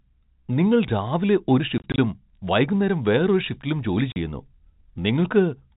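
From 1.78 to 1.98 s, packet loss filled with silence chops the speech. About 80 ms drops out in 20 ms gaps, which fits 20 ms packets. At 4.12 s a single 40 ms silent gap repeats the fault, over the band-limited G.711 telephone sound.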